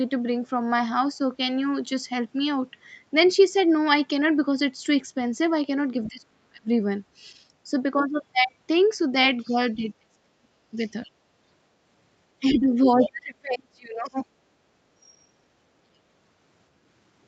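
An echo canceller on the talker's end likely failed to cancel the loudspeaker signal fully, so the other side's voice leaking through appears at 6.04 to 6.1 s as a faint scrap, roughly 25 dB below the speech. From 6.09 to 6.7 s, with both sides active, the canceller likely could not tell its own talker from the echo and clamped down on both. That speech suppressed in double talk makes the voice sink by up to about 40 dB.

The same pattern repeats. A brief leak at 9.41 to 9.53 s, about 30 dB down, is followed by suppression from 9.47 to 10.8 s. Another fragment of the far side's voice comes through at 10.87 to 11.09 s. The longest dip runs from 12.41 to 14.21 s, where the talker drops by up to about 35 dB. Within it, a faint snatch of the other voice surfaces at 13.0 to 13.11 s.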